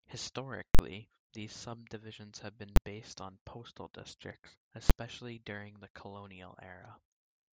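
Invalid numbers at full scale strike this speech three times. From 0.75 to 0.79 s, before "these subdivisions have", a processing block of about 43 ms was overwritten with infinite or invalid values, which fits a 2048-sample block, driving the output hard to the rail. This is heard as a loud pop at each edge with dead silence between. At 2.76 s, before "based on postal districts", and at 4.90 s, before "during the", the blocks are only about 11 ms, which fits 512 samples, so each collapses into a single bang.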